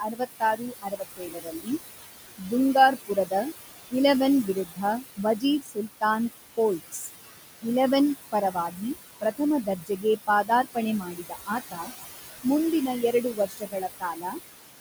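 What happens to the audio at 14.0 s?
At 14.0 s the speech is being cut by the noise suppressor, within a span from 13.12 to 14.39 s. The suppressor mistakes quiet speech for background and turns it down by up to about 21 dB, for roughly 0.7 s in total, so the affected speech sounds swallowed and faint. On a spectrogram, the upper harmonics and consonant energy blank out in patches; the waveform envelope collapses.

Under this, the noise suppressor artifacts continue, pulling the steady room noise down by about 17 dB frame by frame. A spectrogram shows the noise floor as a mottled, blotchy texture that sinks between syllables and rises under them.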